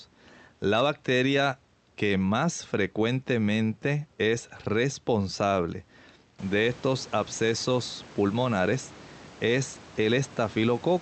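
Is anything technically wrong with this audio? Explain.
No, the signal is in sound technical order: the room's own background noise rises by about 17 dB around six and a half seconds in but stays about 24 dB below the speech, and the top end stopping near 8 kHz is what an Opus call path set to that bandwidth would give.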